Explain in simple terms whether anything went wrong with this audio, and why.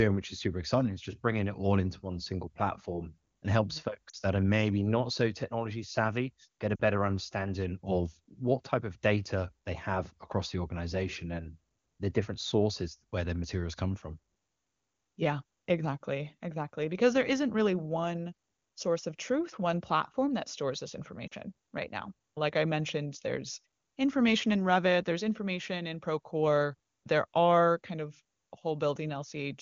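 Three brief glitches, at 4.09, 6.76 and 21.27 seconds, make the speech warble and dip for about 40 ms each. These are lost AMR speech frames, likely two per glitch. The wideband phone decoder filled each gap by stretching the last good sound while fading it.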